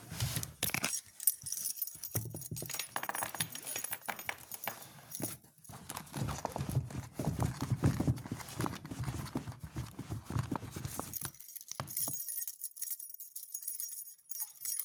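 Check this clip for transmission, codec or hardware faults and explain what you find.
One fault is present, a channel dropout. From 1.46 s to the end, the level drops abruptly by about 6 dB and stays there. The likely cause is one stereo channel being lost, so the mono sum carries only half the shared signal. The waveform envelope steps down sharply, and the spectrogram darkens evenly across all frequencies.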